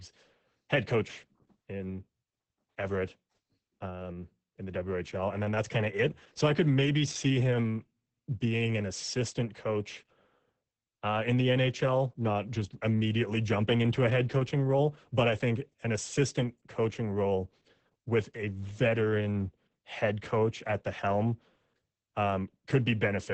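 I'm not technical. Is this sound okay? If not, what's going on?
No. From start to finish the speech sounds muffled, hoarse and a little robotic. This is Opus voice compression squeezing the recording very hard: it drops everything above about 8.7 kHz, taking the crisp top end, and rebuilds the voice only roughly.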